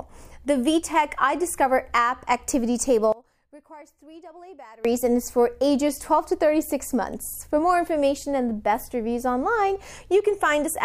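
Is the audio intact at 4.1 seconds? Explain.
No. From 3.12 to 4.85 s the sound collapses by about 24 dB to a faint residue, likely from one channel inverted: the shared content cancels when the channels are summed. Unlike a dropout, a faint difference signal remains.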